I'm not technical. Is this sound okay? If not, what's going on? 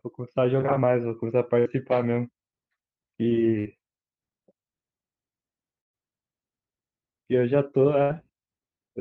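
No. There are bursts of packet loss at 1.59, 3.59, 5.81 and 8.03 seconds. Small chunks of the speech never arrived. The call held the last sound briefly, then jumped ahead. Each time, 60 to 120 milliseconds of speech is lost, and the longest gap, at 5.81, is mostly silence.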